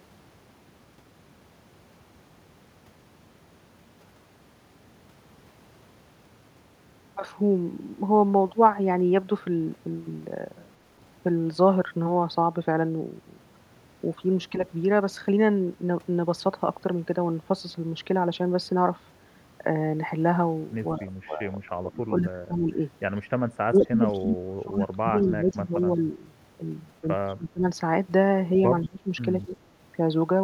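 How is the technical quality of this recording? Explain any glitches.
The recording has two echo-canceller problems from the middle onward. The speech is repeatedly turned down while the far side talks, and a faint echo returns twice.

Speech suppressed in double talk occurs at 14.5–14.62 s, 20.97–22.8 s, 23.67–26.19 s, 27.02–27.64 s, 28.84–29.11 s and 29.45–29.6 s. The voice dips slightly at first, then drops deeply or cuts out in pieces. The likely cause is the canceller failing to separate this talker from loudspeaker echo and attenuating both.

Echo leak appears at 23.74–24.09 s and 27.29–27.33 s. A faint copy of the voice, around 30 dB below the speech, trails it by 182 ms. This is likely residual loudspeaker pickup that the loudspeaker side's canceller did not remove and sent back.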